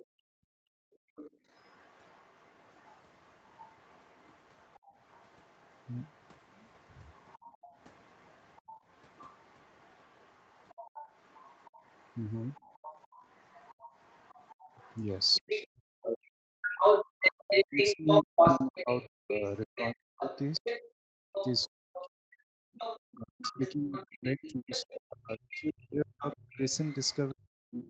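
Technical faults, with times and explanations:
0.00–15.67 s, other side's voice leaking through: the echo canceller likely left loudspeaker playback in the microphone, so a faint second voice sits far beneath, around 30 dB below the talker.
0.05–1.42 s, 4.79–4.95 s, 7.58–7.74 s, background gated by the echo canceller: while the loudspeaker played, the canceller clamped the microphone, so room sound drops out, by about 40, 25 and 31 dB respectively, then returns.
15.37–27.89 s, speech suppressed in double talk: with both sides talking, the canceller likely could not separate the talker from the echo, so the talker's voice dips and breaks up, by up to about 40 dB.
16.62–27.89 s, other side's voice leaking through: residual echo likely passed the canceller here, so the second voice comes through roughly as loud as the talker.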